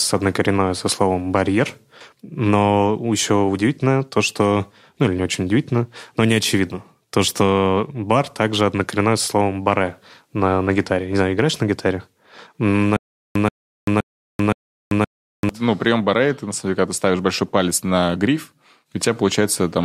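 Speech clip with a stutter with silent gaps from 12.97 to 15.49 s: a 130 ms burst repeats four times, each followed by about 390 ms of digital silence, every 520 ms. This is likely a stalled player or stream, and unlike a simple dropout, the same fragment keeps returning.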